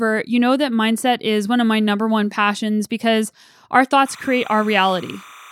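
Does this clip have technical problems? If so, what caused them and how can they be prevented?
Yes. Timecode bleed runs from 4.06 s to the end: a chirping warble near 1 and 2 kHz, 30-frame code leaking in well below the speech. Route timecode on separate, shielded cables away from audio lines.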